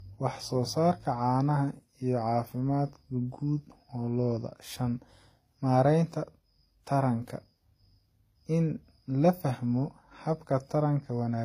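Throughout, the speech has nothing above 14.8 kHz and two mixed artefact textures, not one codec's, likely from transcoding between lossy codecs, WMA then HE-AAC.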